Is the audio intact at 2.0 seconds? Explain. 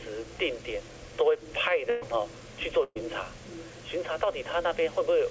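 No. From 1.90 to 2.03 s there is a burst of packet loss: several consecutive packets never arrived in time, so the receiver stretched the last sound it had across about 116 ms, fading it as the gap went on, then resumed with about 120 ms of audio skipped. Unlike a plain dropout, nothing falls silent; instead a held buzz or dying hiss gives way to a jump forward. The G.722 path leaves nothing above 8 kHz throughout.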